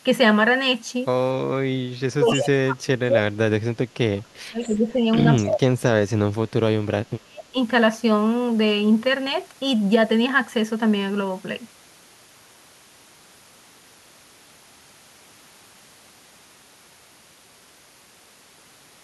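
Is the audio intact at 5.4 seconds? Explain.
No. At 5.4 s the speech sits inside a span of speech suppressed in double talk, from 1.69 to 6.11 s. The level dips and cuts out in pieces, falling by about 35 dB at its deepest. The likely cause is an echo canceller that could not separate this talker from loudspeaker echo while both sides spoke.

An echo leak also runs from 5.37 to 5.49 s. A brief, faint copy of the speech arrives 245 ms late, about 20 dB below the speech. It likely came from a speakerphone whose echo canceller let some of its microphone pickup pass back.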